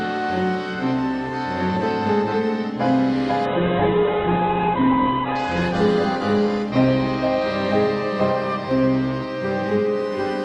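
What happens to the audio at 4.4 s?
A call bitrate drop, 3.46 to 8.17 s, starves the encoder of bits, so the sound turns coarse and watery, cut off above 4 kHz.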